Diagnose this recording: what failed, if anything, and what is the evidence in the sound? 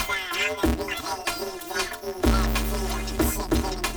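The fault lies in sample-format conversion: planar audio read as interleaved, present throughout. Each block of left samples followed by right samples is being read as alternating pairs, so every block plays twice at double speed. The blocks here are short, about 5.8 ms, which fits a 256-sample buffer, so there is no clear octave jump, only a robotic buzz at 172 Hz. A spectrogram would show harmonic striping spaced 172 Hz apart across the whole sound, and the waveform would show a repeating pattern of blocks every 5.8 ms.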